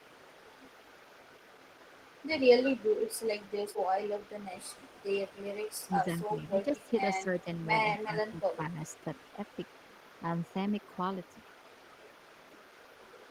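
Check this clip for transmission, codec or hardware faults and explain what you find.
Two faults are audible in this speech: an echo leak running through almost the whole clip, and three short stretches where the speech is pushed down during double talk.

Echo leak, 0.0 to 8.32 s and again from 8.87 s to the end: the far end's echo canceller likely let part of its loudspeaker pickup through. A faint copy of the speech trails about 157 ms behind, roughly 30 dB below the direct voice.

Speech suppressed in double talk, at 2.39 to 2.53 s, 5.88 to 7.47 s and 8.03 to 8.78 s: with both sides talking, the echo canceller likely treats the talker as echo and turns the speech down. It dips by around 10 dB in the first two stretches and around 15 dB in the last.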